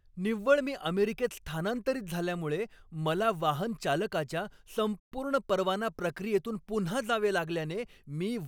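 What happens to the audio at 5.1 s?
The speech cuts out abruptly in mid-flow and the output falls silent for about 120 ms, from 5.00 to 5.12 s, before picking up again. That gap is a playback stall: the player's output went quiet because it likely ran short of data to send, or its playback thread was held up, and sound resumed only once it recovered and could feed the output again.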